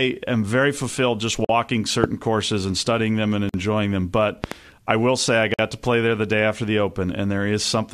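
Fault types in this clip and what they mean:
Gap at a join of encoded pieces: the speech breaks off for about 45 to 48 ms at 1.45, 3.49 and 5.54 s, once every 2 s, right after "am very fulfilled just" and "and studying them and". Separately encoded chunks were joined with their start delay and end padding left in.
Loud pop: a sharp click at 2.04 s, about 20 dB above the speech, then a double pop at 4.44 to 4.54 s, about 15 dB up, just before "I will say I". The speech carries on underneath. It's likely a voltage spike from a plug, switch or static.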